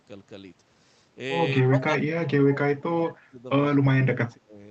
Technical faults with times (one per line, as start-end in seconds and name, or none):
1.66-3.45 speech suppressed in double talk
3.71-4.58 speech suppressed in double talk